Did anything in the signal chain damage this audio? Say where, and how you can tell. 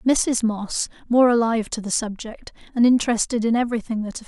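No, nothing damaged this audio.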